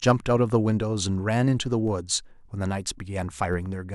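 At 1.88 s and again at 3.53 s you get a DC step. The waveform's zero line suddenly jumps to a new offset, and each jump comes through as a short low thump under the speech, which itself carries on untouched. The offset doesn't hold after either step. It drains away gradually, the way it would behind a high-pass at roughly 5 Hz, so the thump fades out over a fraction of a second.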